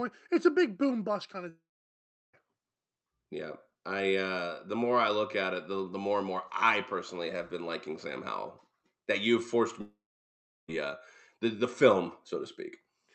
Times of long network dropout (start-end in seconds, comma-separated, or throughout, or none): 1.49-2.35, 9.81-10.70